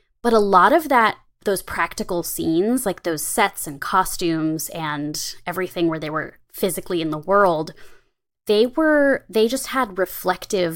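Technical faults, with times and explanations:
10.05 to 10.10 s, one channel drops out: right after "they were they just", the speech abruptly sinks by about 6 dB for a brief 50 ms, then returns to full level. The likely cause is one side of the stereo pair vanishing for that instant. Once the two channels are folded to mono, content shared by both loses half its contribution, giving the sudden 6 dB dip, while anything carried only on the missing side disappears entirely.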